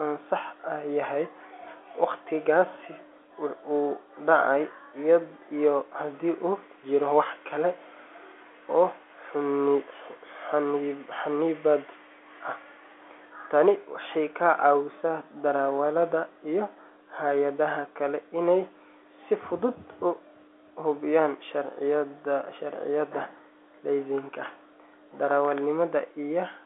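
No technical faults occur in this speech at any point, so there is nothing to place in time order.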